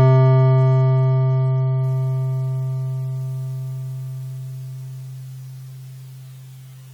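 No technical faults can be heard anywhere in the music. There is nothing to place on a timeline.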